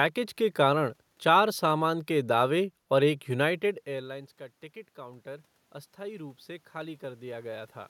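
Automatic gain rising from 4.94 to 7.77 s: once the talker moved away around three and a half seconds in, the input fell about 20 dB. The gain control slowly raised its level by about 6 dB, so voice and room noise swell together.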